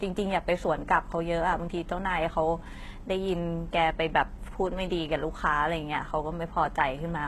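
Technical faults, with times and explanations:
Throughout, HE-AAC compression: The speech has plainly audible codec damage, and nothing is present above 12.3 kHz. The treble sounds rebuilt rather than recorded, so s sounds come out gritty and lispy. This is likely band replication at a bitrate near 16 kbps.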